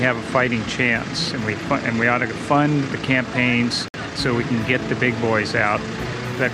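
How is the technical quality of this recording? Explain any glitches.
There is one glitch, a brief dropout at 3.88 to 3.94 s. The sound cuts to silence for about 58 ms, then resumes where it left off. This is likely a Bluetooth stall: radio interference delayed packets, the receiver's buffer emptied, and playback halted until retransmissions arrived.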